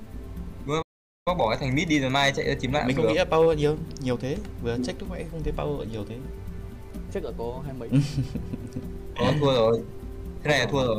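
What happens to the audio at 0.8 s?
A playback stall: from 0.82 to 1.28 s the sound halts into roughly 0.44 s of silence, likely because the player ran short of data, far longer than a momentary dropout.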